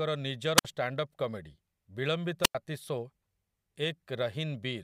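At 0.57 to 0.65 s and 2.42 to 2.55 s, the speech shows a wireless microphone squelch dropout. The fading radio signal brings a brief rise of hiss before the receiver mutes for 57 ms, then 94 ms, leaving flat, near-empty gaps in the waveform and spectrogram.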